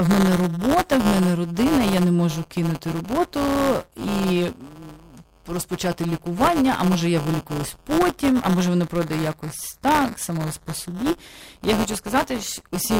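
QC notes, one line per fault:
Throughout: buffer tearing. A steady robotic buzz at 172 Hz rides on the speech whenever it is present and falls away in the gaps between phrases. The writing side and the playback side of the ring buffer have slipped and now cross within every period, so roughly a tenth of each buffer replays audio from about 10 ms earlier, spliced in with hard joins at both ends. The repetition rate fits a 256-sample buffer.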